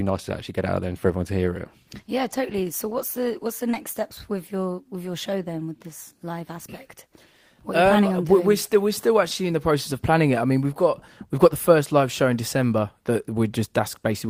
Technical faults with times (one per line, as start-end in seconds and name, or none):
3.71-3.75 short concealed packet loss